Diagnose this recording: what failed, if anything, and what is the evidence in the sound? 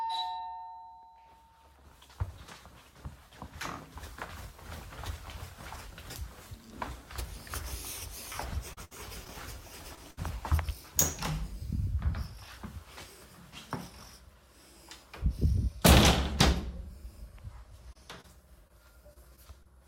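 Repeated packet loss (robotic sound), 8.73 to 9.31 s: network stage; four gaps, longest 60 ms, each patched by extending prior sound, giving choppy texture.

Short concealed packet loss at 9.95 to 9.99 s: network; a 20 ms hole filled by continuing the last sound, heard as a brief smear or wobble.

Burst of packet loss, 10.11 to 10.19 s: network; 60 ms missing, concealed by a held, fading continuation of the preceding sound before real audio resumes.

Scattered short gaps, 17.93 to 19.67 s: network; roughly seven isolated losses, none longer than about 30 ms, each patched, leaving small hiccups and ticks.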